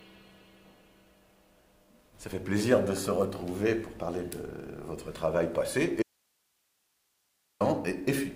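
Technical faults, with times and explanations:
6.02–7.61 s: audio dropout to a faint residue. The sound cuts out abruptly for about 1.58 s, leaving only hiss roughly 45 dB down; likely a lost signal with the path still live.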